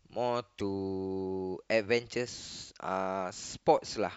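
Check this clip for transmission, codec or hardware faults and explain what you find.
Two brief faults from damaged data in a compressed stream interrupt this speech clip, at 0.58 to 0.61 s and at 3.78 s. In each case corrupted bytes in the coded stream leave the decoder unable to parse the affected frames, so it loses synchronisation and hunts for the next valid frame header before resuming. The first event lasts about 20 ms; the second is only a few milliseconds. Both are heard as short blips that break the continuity of the sound.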